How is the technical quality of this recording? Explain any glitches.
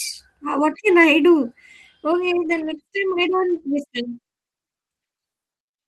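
The speech has one glitch. From 2.45 to 2.79 s there's a lost packet rebuilt from error correction: packets went missing, and the decoder played the low-bitrate backup copies carried in the following packets. There's no dropout, but about 180 ms turns rougher and noisier, which fits roughly nine 20 ms packets.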